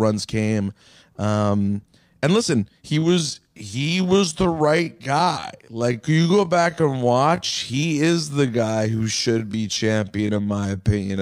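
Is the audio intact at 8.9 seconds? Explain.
No. At 8.9 s you're inside a time-stretched section that runs from about 2.95 s, right after "and listen", through to the end at 11.2 s, where "at that time in" falls. The speech is slowed to roughly 0.6 of its normal pace while the pitch holds steady, likely because software lengthened it by repeating short slices of audio. That's why it drags, with an abrupt drop in pace.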